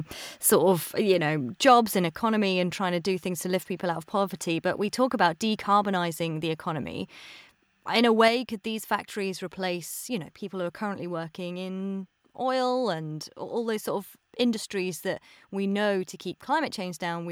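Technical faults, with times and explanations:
1.67–1.73 s, microphone overload: a short burst of harsh crackle rides on a loud peak. The tops of the waveform are flattened, with around 2 percent of samples sitting at the limit, likely because the input was running about 3 dB too hot for the converter.
8.28 s, microphone volume stepped down: the whole sound, voice and background together, suddenly drops by about 4 dB and stays there. That single abrupt step is likely the call software lowering the device's input volume after judging it too loud.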